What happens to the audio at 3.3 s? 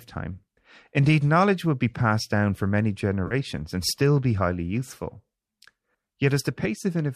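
At 3.27 s the audio smears briefly. This is AAC frame loss with concealment. It runs from 3.27 to 3.34 s, just after "passed down for many" and before "and still be highly". About 40 ms of audio is missing, which fits four lost frames of the likely low-delay AAC stream. The decoder filled the gap from the last good spectrum. You hear a short, noisy, phasey blur, not silence.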